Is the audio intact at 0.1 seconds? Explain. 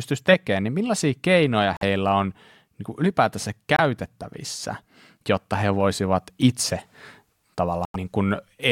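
Yes, the audio at 0.1 seconds is intact, with no fault present at that moment.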